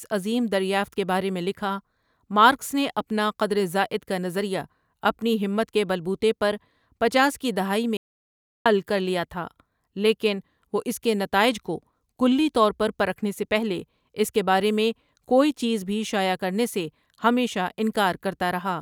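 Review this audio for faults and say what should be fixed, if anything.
An audio dropout to silence at 7.97 to 8.66 s, after "پچاس کی دہائی میں", leaves 0.69 s of total silence with no room tone before "حل کر لیا تھا". The cause is likely a brief loss of the input signal while recording continued. Securing connections and monitoring the input live would prevent it.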